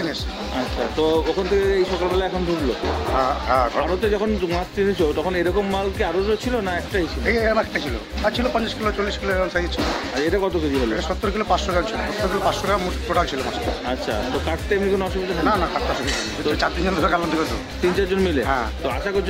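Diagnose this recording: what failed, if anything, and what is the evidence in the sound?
Nothing failed in this recording. No stage of the chain, from capture through to playback, leaves any audible trace of a fault.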